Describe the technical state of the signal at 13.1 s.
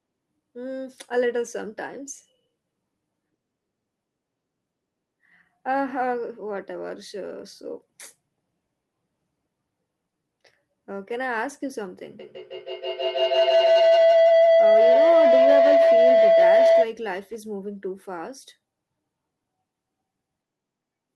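At 13.1 s the signal is in a feedback howl, running from 12.19 to 16.94 s. A microphone is picking up a nearby loudspeaker on the same call. Each trip adds gain, building a tone around 700 Hz, with repeats about 150 ms apart, that peaks about 11 dB above the speech.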